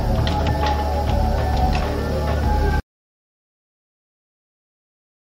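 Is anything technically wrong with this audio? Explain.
Yes, there are two kinds of fault.

The first is frames out of order, heard from 0.31 to 0.49 s and again from 1.54 to 1.68 s. In each stretch, two adjacent runs of coded frames were decoded in swapped order. The halves are about 85 ms long in the first event and about 64 ms in the second, which fits runs of a few codec frames each. The sound skips back and forth in a garbled flutter. The total duration is unchanged. On a spectrogram, the harmonic contours jump discontinuously at each seam. The waveform shows abrupt envelope steps there.

The second is an audio dropout to silence, from 2.80 s to the end of the clip. The sound stops mid-flow and never returns. The gap is silent, with no room tone or noise floor. The likely cause is that the input was lost, through a disconnected device or failed link, while recording or encoding continued writing silence. 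The waveform becomes a flat line, and the spectrogram goes dark across all frequencies.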